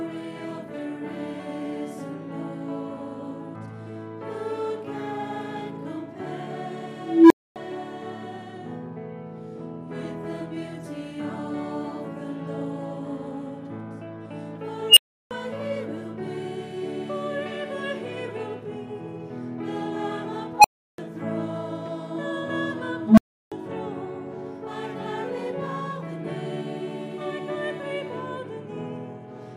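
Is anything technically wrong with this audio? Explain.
Yes, an unstable filter fires four times: 6.98 s (about 300 Hz tone), 14.89 s (around 3 kHz), 20.57 s (about 700 Hz) and 23.04 s (about 200 Hz). A recursive filter's feedback runs away, so a squealing tone swells over 68 to 322 ms, clips and overflows, and the sound drops out for 256 to 341 ms. A spectrogram shows a brightening horizontal line ending in a blank gap, and a waveform shows a growing, flat-topped envelope followed by silence.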